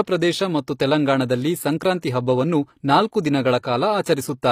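HE-AAC compression runs throughout this short speech clip, plainly audible from start to finish. The treble sounds synthetic, as if the upper band were rebuilt rather than carried, which likely comes from spectral band replication: lower bands are copied upward and shaped by a coarse envelope, so their harmonics misalign with the true ones above the crossover. Sibilants turn gritty and lispy, nothing remains above 15.5 kHz, and the damage fits a low bitrate near 24 kbps.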